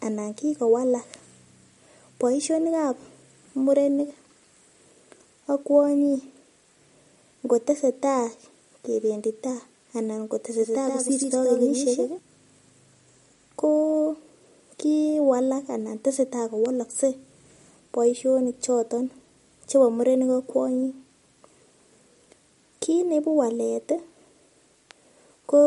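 From start to finish the speech sounds watery and swirly, with plainly audible damage and nothing above 11.2 kHz. That's likely MP3 compression, at a low bitrate around 47 kbps, zeroing weak frequency lines frame to frame and cutting the treble.

Between 10.59 and 12.19 s a second full-band copy runs roughly 150 ms behind, a few dB quieter, with no room colour and abrupt edges. That's likely a doubled audio track, the same signal mixed in twice out of step.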